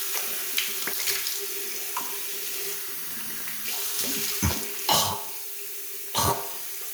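From start to finish the sound carries low bit depth with noise shaping. It was quantised to about 6 bits, and the rounding error was pushed upward in frequency. This leaves a steady, thin hiss nearly as loud as the sound itself. A spectrogram shows a noise floor climbing steeply toward the top of the band, and the waveform looks fuzzy rather than stepped.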